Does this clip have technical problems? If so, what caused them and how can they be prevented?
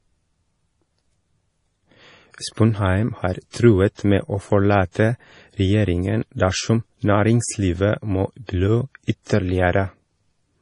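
Yes. The speech is dull and watery throughout, with nothing above 10.5 kHz. This is likely MP3 compression at a low bitrate, which fits 32 kbps. Prevent it by encoding at a higher bitrate.

Pre-echo puts a brief hiss of 31 to 41 ms before sharp attacks at 2.54, 3.95 (before "med å"), 4.92, 8.46 (after "dersom næringslivet må") and 9.23 s (after "dersom næringslivet må blø"). The codec spread its noise across each block. More bits or shorter transform blocks prevent this.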